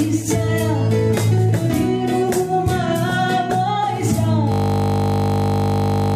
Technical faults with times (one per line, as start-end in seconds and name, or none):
4.52-6.16 system hang loop